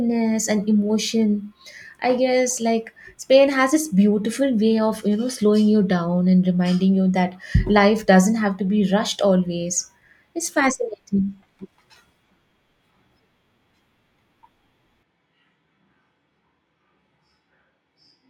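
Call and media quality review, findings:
Sudden change at 15.03 s, lasting to end. Voice roomy and hollow, thinner bass. Level down about 5 dB. Room noise roughly 35 dB under speech. Likely a switch to a distant microphone; close mic signal dropped.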